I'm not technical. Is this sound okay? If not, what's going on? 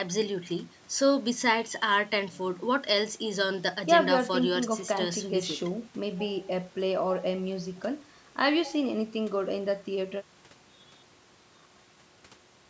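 Yes, no faults here: the speech has simply been through a call's microphone processing, which trims the deepest bass and leaves nothing above 8 kHz, as is normal for a call.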